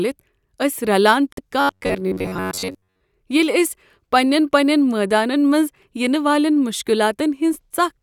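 At 1.32 s the sound cuts out abruptly and stays silent until 1.39 s. This is a Bluetooth dropout, likely caused by wireless packets arriving too late to play. The headphones had nothing to output, so they went quiet. When sound returns it has jumped ahead. About 46 ms of speech is skipped, which fits roughly two lost audio frames. It sounds like a brief hard hole in the speech.

From 1.61 s to 3.01 s the speech turns into a rigid, metallic buzz. This is robotic sound from repeated short buffers. New audio likely arrived too slowly, so the last short buffer was played again and again. The repeats impose a fixed pitch of 93.8 Hz, which points to buffers about 10.7 ms long. Most of the real audio in this stretch, roughly two thirds or more, is skipped. The buzz still loosely tracks the speech.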